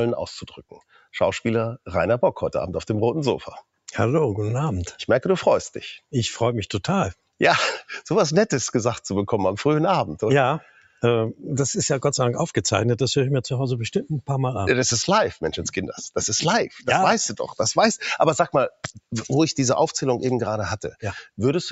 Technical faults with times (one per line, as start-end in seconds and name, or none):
0.00-21.72 noise suppressor applied to music or sounds
0.61-1.14 sound cut by the noise suppressor
7.14-7.40 sound cut by the noise suppressor
10.61-11.03 sound cut by the noise suppressor
16.69-16.87 sound cut by the noise suppressor
18.70-19.11 sound cut by the noise suppressor